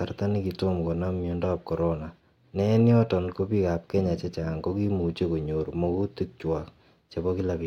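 Listening closely to the speech recording, nothing stood out as a technical fault at any point.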